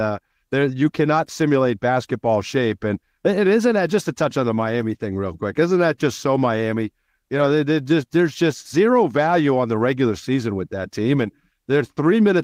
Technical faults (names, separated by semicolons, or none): none